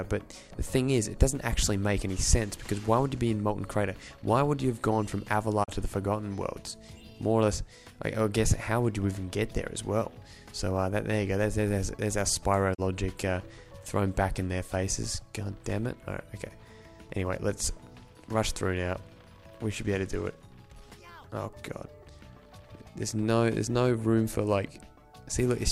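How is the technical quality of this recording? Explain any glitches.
The recording has two brief digital broadcast dropouts, at 5.63 s and 12.73 s. Each time the receiver mutes for about 32 ms, consistent with a single corrupted frame, fading out over 20 ms before the sound returns. The smooth fade marks a deliberate receiver mute, unlike the hard edge of a packet-loss click.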